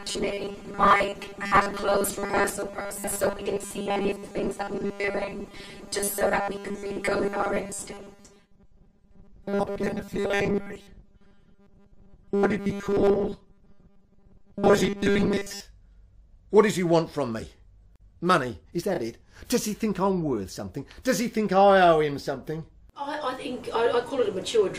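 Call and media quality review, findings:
Robotic sound from repeated short buffers, 0.01 to 15.6 s. Likely cause: audio arriving too seldom at playout, with the gap filled by looping the last chunk of about 5 ms while fresh audio is skipped. Roughly 70% of the sound is repeated rather than real. The loop imposes a fixed 200 Hz buzz, turning the sound rigid and metallic while its rough shape stays traceable.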